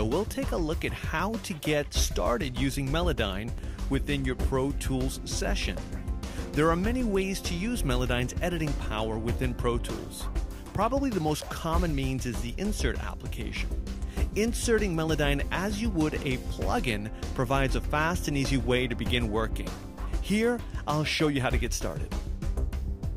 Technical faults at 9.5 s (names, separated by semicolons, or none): none